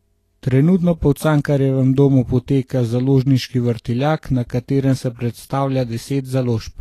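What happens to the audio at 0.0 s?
From the start, the speech has no content above 14.1 kHz and a hissy, grainy treble throughout, likely Vorbis compression at a low bitrate around 36 kbps.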